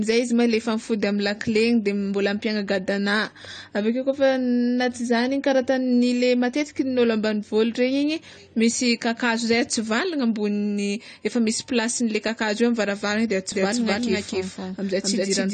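Throughout, AAC compression likely causes dull, smeared speech with fizzy sibilants; a spectrogram shows nothing above 9 kHz, fitting a 32 kbps stream. From 13.52 s to the end, a doubled audio track appears: a copy at the same level trails by roughly 0.3 s, and the waveform shows each syllable repeated, starting abruptly.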